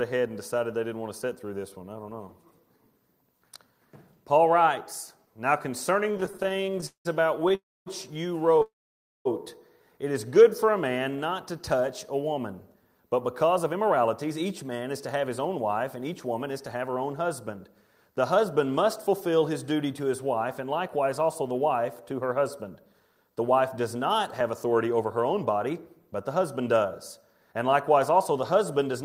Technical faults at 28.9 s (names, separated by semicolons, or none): jitter buffer speed-up